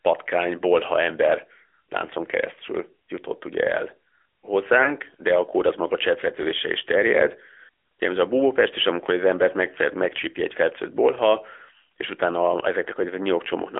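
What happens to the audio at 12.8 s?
At 12.8 s the speech carries AMR narrowband mobile codec damage, present throughout: band-limited to 300 Hz–3.4 kHz, with a buzzy, synthetic vocal-tract resynthesis that fits a mid-rate mode around 10 kbps.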